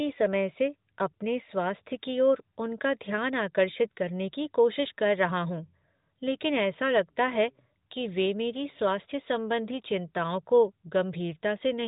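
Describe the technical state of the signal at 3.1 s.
At 3.1 s the signal is intact, with no fault in the speech beyond the narrowband character of the AMR narrowband mobile codec path, which leaves nothing above about 3.8 kHz.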